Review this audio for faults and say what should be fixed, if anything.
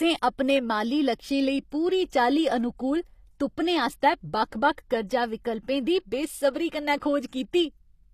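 The whole clip carries plainly audible codec damage, likely from HE-AAC compression. The s sounds come out gritty and metallic. The treble stays bright but sounds synthetic, and nothing is present above about 14.9 kHz. This is how spectral band replication sounds. The codec spends its bits on the lower band, then copies that material upward under a coarse envelope. The rebuilt harmonics do not line up with the real ones. The damage points to a low bitrate around 24 kbps. To prevent it, keep the original recording or re-encode at a much higher bitrate with plain AAC or a lossless format.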